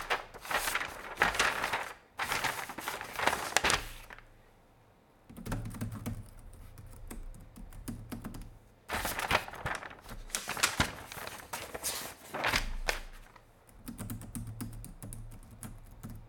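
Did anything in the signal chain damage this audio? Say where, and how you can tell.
Yes. Twice the audio stutters with chunks out of order, at 9.54 to 9.58 s and again at 11.02 to 11.06 s. Each spot is a brief jumbled blip. What's happening is a 20 ms chunk landing one slot late, so it plays after the chunk that should follow it. Nothing goes missing, but the sequence is swapped, leaving hard seams. That points at the buffer or driver stage, or possibly packet reordering on the network.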